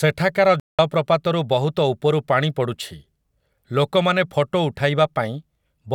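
A speech clip with a Bluetooth dropout: the sound cuts to silence from 0.60 to 0.79 s, a gap of about 190 ms, likely from a run of lost wireless packets. Unlike a stall, it resumes further along, as though it had kept playing.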